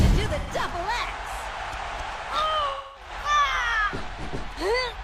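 AAC frame loss with concealment occurs twice: the decoder lost frames and rebuilt the missing audio from the last good spectrum. At 0.39 s, an 85.3 ms gap, which fits two lost frames, becomes a smeared, phasey patch. At 2.69 s, a 256 ms gap, which fits six, decays toward silence before fading back.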